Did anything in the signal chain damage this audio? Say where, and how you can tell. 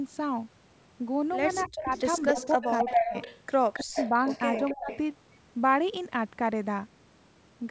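Yes. Echo leak at the call-processing stage: a copy of the speech trailing 271 ms behind, from 1.61 to 3.4 s, 3.73 to 4.09 s and 4.26 to 4.99 s. It fades from roughly equal level to about 10 dB down. The likely cause is a far-end echo canceller missing loudspeaker pickup. The fixed lag sets it apart from room reverb.

Speech suppressed in double talk, also in call processing: the speech dips sharply, by far more at 3.81 to 3.97 s, at 1.65 to 1.91 s, 2.32 to 2.39 s, 2.55 to 3.14 s and 4.74 to 4.91 s. The likely cause is the canceller ducking everything while echo overlaps. These are overlap-bound gain cuts, not packet-loss gaps.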